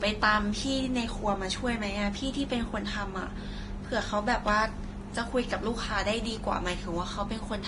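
Throughout the speech, nothing sounds above about 10.7 kHz. The top end is dull and cut off sharply. Two different kinds of coding damage are heard together. This is likely transcoding between lossy codecs. The mix points to a low-rate Vorbis encode later re-encoded as Opus. The second codec spent bits copying the first one's artefacts and added its own. The first encode's low cut-off remained.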